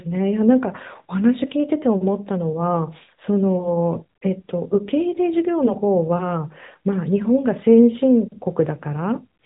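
From start to finish the speech carries the AMR narrowband mobile codec sound. Everything above about 3.8 kHz is gone, so the voice has the boxed-in quality of a phone call, and the coding damage is plainly audible as a buzzy, synthetic edge from the vocal-tract model rebuilding each 20 ms frame. The degree of roughness fits a mid-range rate near 10.2 kbps. A spectrogram shows a hard ceiling at 3.8 kHz with empty space above it.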